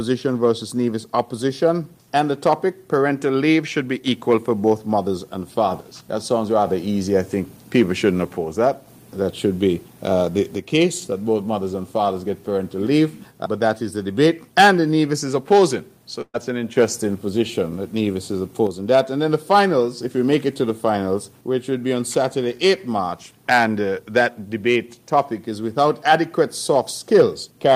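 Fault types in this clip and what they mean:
Burst of packet loss: at 16.21 to 16.36 s, a run of consecutive packets failed to arrive in time, so about 120 ms of audio never reached playback. The receiver covered roughly 124 ms by extending the last sound it had and letting it decay, which is heard as a held, fading tail, followed by about 40 ms of silence. The audio then picks up further along, with the lost stretch skipped entirely.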